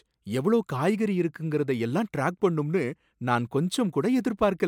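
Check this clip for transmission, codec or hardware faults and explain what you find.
No faults can be heard anywhere in the recording.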